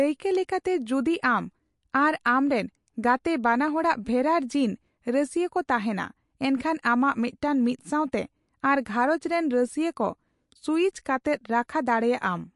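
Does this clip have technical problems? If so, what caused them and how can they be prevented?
Yes. Throughout, the speech sounds watery and swirly, with a hard treble ceiling at 11.3 kHz, likely MP3 compression at a starved bitrate near 48 kbps; a spectrogram shows flickering holes. Encode at a higher bitrate or keep a lossless master.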